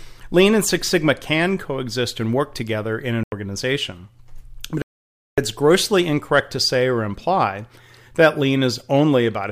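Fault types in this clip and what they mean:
Bluetooth stall: Radio interference likely delayed packets to the headphones, so their playback buffer ran empty and output paused until resent data arrived. The speech drops to silence for 0.09 s after "work together in an" and 0.56 s before "grossly incorrect to say", then resumes.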